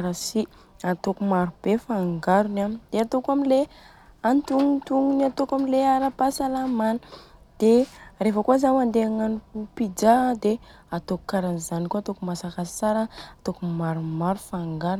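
No technical faults can be heard anywhere in the speech.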